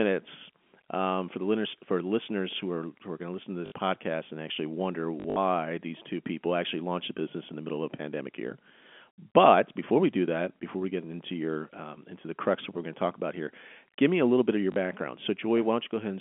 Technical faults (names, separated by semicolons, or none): packet loss with last packet repeated